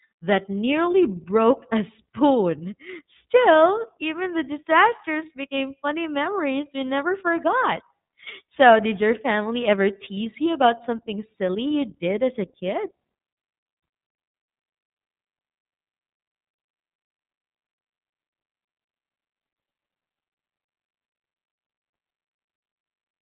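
iLBC codec damage runs from start to finish of this speech. The codec squeezes the signal into a narrowband channel, so nothing above about 3.8 kHz survives, leaving the voice dull and boxed-in. Each block of excitation is coded on its own rather than predicted from the last, and the plainly audible roughness and slightly synthetic grain fit the 30 ms frame mode at around 13.33 kbps.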